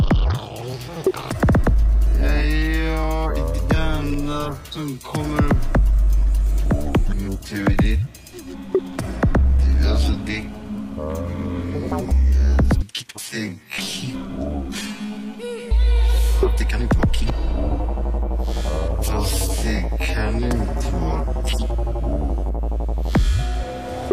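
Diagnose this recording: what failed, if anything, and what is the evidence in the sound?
Clock drift buffer slips run from 0.83 s to 24.04 s: a click recurs about every 1.11 s, around twenty in all, with metronome-like regularity. This points to the driver or buffer stage, likely two devices on independent clocks differing by roughly 150 ppm. The buffer between them slowly fills or drains until a handful of samples, around seven, is dropped or repeated, and each slip leaves a discontinuity in the audio.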